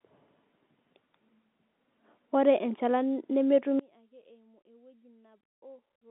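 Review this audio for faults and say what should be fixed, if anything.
From 3.79 s to the end at 6.10 s the speech collapses by about 29 dB, leaving a faint residue within the narrow telephone band. This is likely one channel inverted, cancelling the shared centre content on mono summing. Unlike a dropout, a faint trace persists rather than silence. Checking polarity on each channel before mono downmixing would prevent it.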